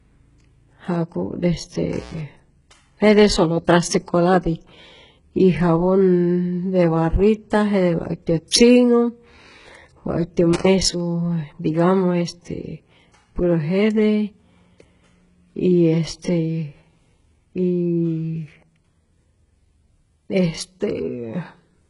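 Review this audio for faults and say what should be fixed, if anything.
The whole speech clip has heavy codec damage, likely from HE-AAC compression. Nothing comes through above about 11.1 kHz, and the treble below that is rebuilt rather than real. Spectral band replication copies lower bands upward and shapes them with a rough envelope, so the harmonics don't line up across the crossover and s sounds come out gritty or lispy. The damage points to a very low bitrate, around 12 kbps. Re-export from the original source at a much higher bitrate, or use plain AAC or a lossless format.

There are two intermittent contact events, from 1.92 to 2.19 s and from 10.53 to 10.68 s. The line is open for about 121 ms in the first and about 85 ms in the second. The signal drops out or breaks up, with crackle at the edges and hiss underneath while the connection is broken. That's a loose cable or plug opening for a moment. 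Reseat or replace the cable and connectors, and secure them so they can't move during recording.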